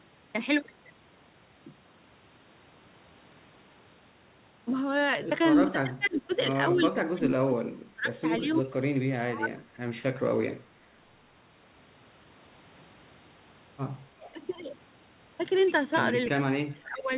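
From 5.66 to 10.01 s the speech keeps dipping and breaking up, for about three seconds in all. At its deepest it drops by about 25 dB. This is likely speech suppressed in double talk. Both ends spoke at once. The echo canceller could not tell the local talker from its loudspeaker echo, so it turned the whole signal down.

Inside that stretch there are two short echo leaks. From 6.32 to 6.38 s a faint copy of the speech returns 338 ms late, at about 25 dB below it. From 8.5 to 8.59 s a louder copy returns 344 ms late, at about 15 dB down. The echo canceller likely failed to remove all of the loudspeaker sound reaching the far microphone, and the remainder was sent back.

From 14.21 to 14.27 s a brief dip of about 5 dB is likely double-talk suppression again. It overlaps an echo leak from 14.26 to 14.31 s, with a 362 ms delay at about 25 dB down. This is likely the same incomplete echo cancellation.

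From 16.35 to 17.1 s the speech drops by about 25 dB, for roughly half a second. This is likely double-talk suppression once more.

Throughout the clip, nothing is heard above 4 kHz. That fits the narrowband G.711 A-law call path.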